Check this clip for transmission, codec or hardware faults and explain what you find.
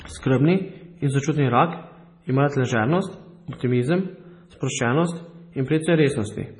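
One codec fault runs through the whole of this speech clip: heavy MP3 compression is the likely cause. Nothing reaches above 10.5 kHz, where the encoder has cut the treble to save bits, and weak frequency lines below that cutoff flicker on and off between frames, giving a watery, swirling texture with metallic chirps on s sounds and smeared consonant onsets. The damage is severe enough to fit a bitrate around 24 kbps. A simple low-pass filter would dull the top end just the same but leave no swirl or chirping.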